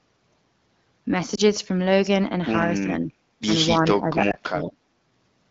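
At 1.35 to 1.41 s, one 20 ms AMR frame failed its checksum and was lost; the decoder filled the gap by repeating the last good pitch and vocal tract settings at reduced gain, causing a brief dip or warble in the speech.

From 2.84 to 3.11 s, and again from 3.80 to 4.79 s, the likely cause is speech suppressed in double talk: with both sides talking, the echo canceller could not separate the near talker from loudspeaker echo and turned the talker down. The first dip is mild, about 5 dB. The second goes much deeper, about 20 dB.

Within that second stretch, at 4.31 to 4.36 s, another single 20 ms AMR frame was lost and concealed the same way, adding a short dip or warble.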